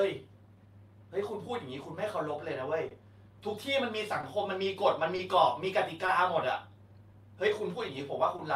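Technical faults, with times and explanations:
throughout, clock drift between sender and receiver: The pacing never quite settles, with faint hiccups recurring at uneven spacing across the whole clip. The sender's audio clock runs about 2% slow against the receiver's, so the jitter buffer keeps draining and must be topped up.
0.15–3.77 s, repeated timing corrections: Tempo feels slightly sluggish and unsteady here, with small, barely audible stutters. To keep pace with the slower sender, the receiver plays at 98% speed, repeating short slivers of sound that add up to roughly 70 ms.
2.89–2.92 s, 4.21–4.24 s, 5.16–5.19 s, 6.06–6.09 s, 8.37–8.40 s, short stall from a late packet: At each point a sound is briefly held with a slight buzz or dip. A packet arrived late and the buffer ran dry, so the receiver stretched the last sound for 20 ms until it came, losing nothing.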